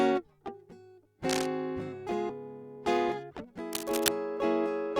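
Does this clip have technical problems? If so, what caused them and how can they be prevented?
Yes. Cable scratch noise appears from 1.29 to 1.46 s and again from 3.73 to 4.08 s: bursts of uneven scratching over the music, about 5 dB below it at first and then about as loud as it. This is likely a worn connector or cable whose contact resistance fluctuated as it moved. Replacing or cleaning the cable and securing the connector would prevent it.

A skip ahead occurs at 2.29 s. Playback jumps forward with no gap, and about a second of music is missing because a stretch of audio was dropped while newer audio was already queued, so the two sides are spliced directly. A larger or better-tuned jitter buffer would prevent it.

A jitter buffer speed-up runs from 2.63 to 3.52 s. The music plays at 108% speed with unchanged pitch, so the tempo briefly rushes as the receiver trims short pitch-period slices, removing about a tenth of a second to reduce excess buffered delay. 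Steadier network delivery would prevent it.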